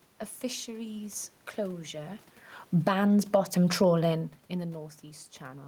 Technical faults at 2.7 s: automatic gain falling

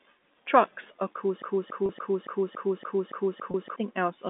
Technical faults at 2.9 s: broken-record loop

